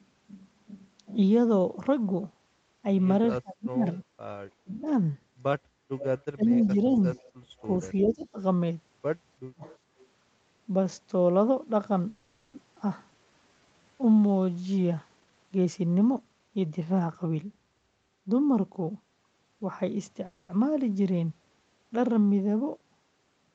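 From 3.42 to 3.87 s the speech is pulled down by up to about 35 dB, and again from 4.64 to 4.87 s by about 25 dB. This is speech suppressed in double talk, likely caused by an echo canceller that could not tell the near talker from loudspeaker echo while both sides spoke, so it attenuated everything. Later dips follow at 6.34 to 6.99 s (about 15 dB), 8.04 to 8.38 s (about 20 dB) and 9.39 to 9.63 s (about 40 dB). Each one sounds like the speech ducking away or breaking into fragments. On a waveform the envelope collapses abruptly, and on a spectrogram the harmonics fade out over those spans.

An echo leak runs from 5.98 to 8.26 s. A delayed copy of the speech trails the original by 343 ms at about 15 dB below it, likely because the far end's echo canceller left part of its loudspeaker pickup in the signal it sent back. It returns from 9.64 to 10.07 s, fainter at about 25 dB down. It is heard as a ghostly doubling. 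A spectrogram shows faint replicas of the harmonic patterns shifted right by a third of a second.

At 12.09 to 12.55 s a call audio freeze stretches the last sound into a decaying buzz for 440 ms, likely because packets stalled and the jitter buffer ran dry. The speech then resumes with nothing lost, only delayed. A second freeze at 20.26 to 20.51 s fills 230 ms the same way. In the spectrogram these appear as smeared, static horizontal bands, and the waveform shows a repetitive tail that dies away.

At 12.75 to 12.78 s playback skips ahead. Roughly 300 ms of speech is dropped and the two sides are butted together with almost no gap, so that stretch of speech simply vanishes. A waveform shows an abrupt splice, and on a spectrogram the formant tracks jump discontinuously at that instant.

From 13.07 to 14.45 s a jitter buffer slow-down plays the audio at 83% speed. The receiver repeated single pitch periods to add 243 ms of reserve, so sounds drag out at unchanged pitch. 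On a spectrogram the harmonic spacing stays constant while the syllables widen in time. The waveform shows repeated, near-identical cycles.

From 15.16 to 17.36 s a jitter buffer speed-up does the reverse, running at 119% speed and trimming roughly 400 ms by cutting out short pitch-period pieces. The speech sounds hurried but not higher. A spectrogram shows compressed syllables with unchanged harmonic spacing, and the waveform has small discontinuities where the cycles were removed.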